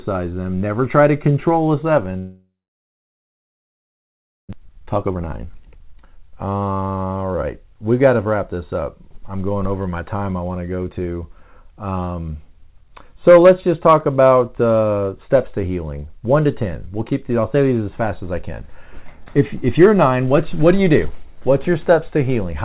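At 2.18 s, just after "try to control a", the audio cuts out. A short buzz fades away, and then there is near silence for about 1.97 s, until 4.55 s. This is a long network dropout, likely caused by packets lost in transit, and roughly 1.6 s of sound never comes back. On a waveform it appears as a flat gap. On a spectrogram it shows as a blank stretch after a brief smeared tail.

From 4.59 s to 7.18 s a jitter buffer speed-up follows. The receiver had built up around 0.7 s of extra delay and works it off by trimming tiny pitch-period slices over and over. The speech runs at about 127% speed with unchanged pitch and sounds hurried. On the spectrogram, the harmonic spacing stays steady while the syllables are squeezed closer together, all beneath a ceiling at 4 kHz, which fits a narrowband call codec such as G.711.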